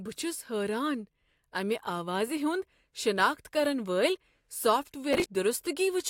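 From 5.13 to 5.25 s the speech breaks into processor overload crackle. The processor falls behind and misses deadline after deadline for buffers of around 10 ms, skipping each one and leaving a string of hard-edged gaps. Unlike a single dropout, it sounds like a short run of gritty tearing.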